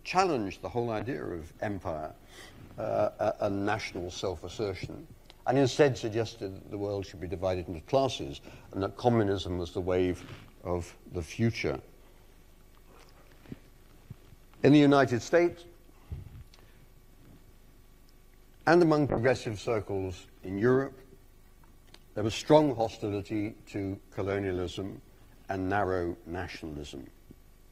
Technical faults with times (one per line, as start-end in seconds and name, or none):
1.01-5.31 call bitrate drop
19.11-27.71 call bitrate drop